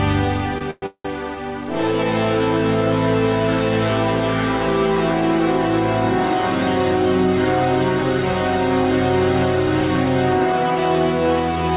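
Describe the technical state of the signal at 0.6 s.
At 0.6 s there is a short stall from a late packet, running from 0.58 to 0.63 s. A packet arrived late and the jitter buffer ran dry. The receiver held the last sound for about 25 ms until the data came. Playback then resumed where it stopped, so nothing is lost. Everything after plays 25 ms later. The sound is briefly stretched, with a slight buzz or dip. The G.711 mu-law call path keeps everything below 4 kHz.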